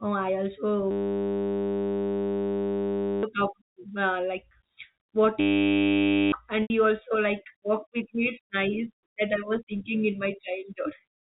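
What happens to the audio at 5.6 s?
At 5.6 s the speech is replaced by a system hang loop running from 5.4 to 6.32 s. The playback side stalled while the audio hardware kept reading the same ring buffer, so one 10 ms slice repeats over and over. At a 100 Hz repetition rate it comes across as a steady, flat buzz rather than a stutter, and roughly a second of the real speech never reaches the output.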